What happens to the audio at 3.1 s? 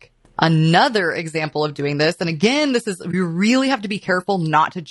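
From 3.11 to 3.14 s the speech briefly dips. This is AAC frame loss with muting: the decoder zeroed the spectrum of a missing frame, and the overlapping windows faded the sound out and back in, which fits a single lost frame of about 20 ms. Around that gap the speech sounds rough and grainy, with noise between the harmonics, likely from low-delay AAC compression at a rate that fits about 32 kbps.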